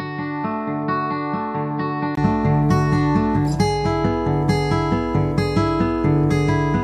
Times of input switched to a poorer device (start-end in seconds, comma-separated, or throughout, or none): 0.00-2.17